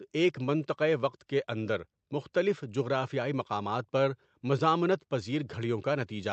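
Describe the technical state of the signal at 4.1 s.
At 4.1 s the speech comes through intact, with no fault at that moment beyond the ordinary character of the call path it travelled through.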